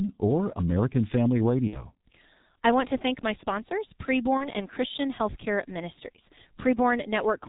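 Throughout, the speech carries G.723.1 codec damage, heavy and consistent with about 6.3 kbit/s coding. The spectrogram is empty above 4 kHz, and the muffled, hoarse sound blurs the consonants.

From 1.67 to 1.86 s, VoIP packet loss concealed by the speech codec stretches the sound into a fading buzzy tone or coloured noise. This fits two lost 30 ms frames. The waveform decays, and the spectrogram shows smeared, repeated harmonics.

Just after "to thank my sponsors", from 4.37 to 4.50 s, a shorter concealed gap fits one lost frame. There is a brief stretched smear, and the voice stays weak or distorted afterwards.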